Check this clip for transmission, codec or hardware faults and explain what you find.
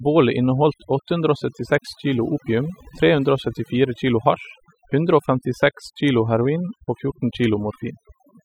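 Across the whole speech clip the background drops and breaks up into twinkling specks. This is overdone noise removal: a noise reducer set too strong cuts individual frequency bands near its noise estimate, taking quieter voice detail with them.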